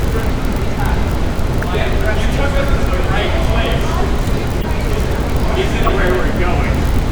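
At 1.62 s, a corrupt frame decoded produces a sharp blip in the everyday sound. Damaged bits in the compressed data were played anyway, so energy lands at wrong frequencies. A second burst runs from 4.61 to 4.65 s, somewhat quieter. A third, from 5.86 to 5.90 s, is the loudest. Each chirp lasts only as long as the damaged data, which points to a few frames being hit.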